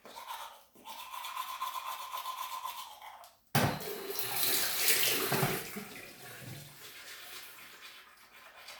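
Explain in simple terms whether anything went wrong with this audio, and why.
Nothing went wrong with this recording of sounds. There is no point in it where a technical problem can be heard, so there is nothing to explain or fix.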